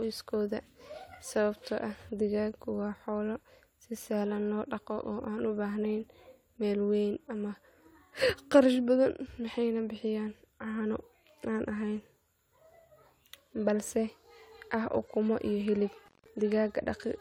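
At 16.06 s the speech drops out in an intermittent contact fault, running to 16.28 s. A loose plug or cable connection briefly opens, breaking the signal path for roughly 174 ms. Crackle marks both edges of the gap, with faint hiss remaining while the line is open.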